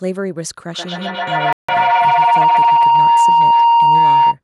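A speech recording where, from 0.73 s to 4.39 s, a ringing tone around 1 kHz swells to about 14 dB above the voice, with the loop repeating roughly every 150 ms: feedback howl from a microphone-loudspeaker loop gaining level each pass. At 1.53 s the sound drops to silence for 0.16 s before resuming, likely a Bluetooth stall where the headphones' buffer emptied while delayed packets were resent.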